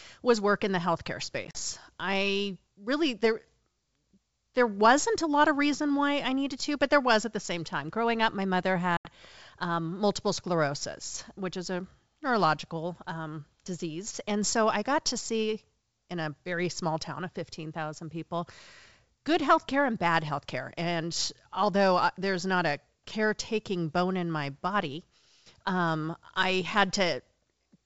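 At 1.45 to 1.60 s, after "work in the healthcare", packet loss on an ADPCM call leaves several silent holes, about 60 ms in total, with the longest gap 40 ms. At 8.97 to 9.09 s, after "up my mother", another 80 ms drops out. Each time, the receiving decoder's predictor and step size lose track of the sender's. The sound returns slightly distorted before settling, heard under the clear wideband G.722 coding.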